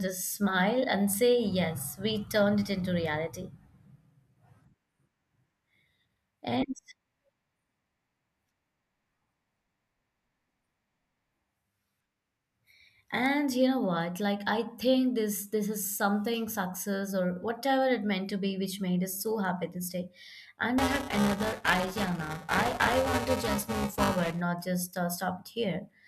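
It's a speech recording with two separate problems. First, there are two bit error spikes, single isolated ticks at 13.26 s, just before "you know what", and at 19.45 s, between "which made us so" and "this day". Each is one corrupted sample where a flipped bit throws the value off by a power of two and it snaps straight back. So you hear a dry, broadband click that has nothing to do with the voice around it. Second, from 20.78 s to 24.41 s, ending just before "just uh", there's buffer tearing. The speech picks up a steady robotic buzz at about 345 Hz, which fits a 128-sample buffer being read while it's still being written. The writer and reader have drifted so their positions cross inside each period. Roughly a fifth of every buffer ends up holding stale audio from one lap back, a few milliseconds old, with hard joins on both sides. That repeating splice is what gives the rattle, and it only comes through while there's signal.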